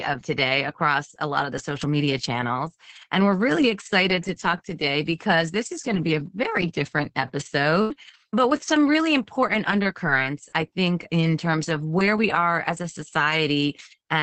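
A burst of packet loss runs from 7.81 to 7.93 s. Several consecutive packets of speech failed to arrive in time, so the receiver stretched the last sound it had for about 82 ms, fading it as the gap grew, which gives a brief held buzz or dwindling hiss. Playback then jumps ahead, skipping about 60 ms of speech, and the timing shifts by about 22 ms as the jitter buffer re-aligns.

Lost packets rebuilt from error correction follow repeatedly, thirteen times between 7.90 and 13.85 s. They cluster around 8.56 to 8.79 s, just before "really important", and continue after it at irregular intervals up to 13.79 s. Each rebuilt stretch is mostly about 60 ms. In each case the next packet carried a coarse backup of the lost one, which the Opus decoder played instead, so nothing drops out. Those moments sound grainier and noisier than the surrounding speech, which already carries the call codec's low-bitrate coding noise within its roughly 8 kHz bandwidth.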